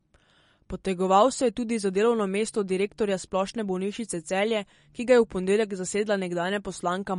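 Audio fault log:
throughout, MP3 compression: the speech has a plainly audible watery, swirly quality, with chirpy, metallic edges on sibilants and softened onsets. On a spectrogram the energy stops flat at a ceiling near 10.6 kHz, and the upper bands break into flickering patches that appear and vanish between frames, while the waveform's attacks look smeared. The likely cause is MP3 encoding at a low bitrate, around 40 kbps, which cuts the top band and drops weak frequency lines.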